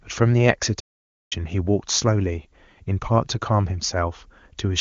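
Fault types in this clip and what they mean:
Playback stall: speech drops to silence from 0.79 to 1.33 s, then resumes; the player likely ran out of data or its thread was blocked.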